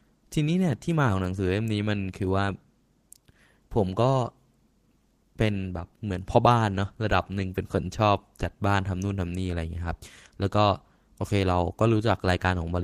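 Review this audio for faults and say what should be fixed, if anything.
Nothing stood out on listening, so there is nothing here that needs fixing.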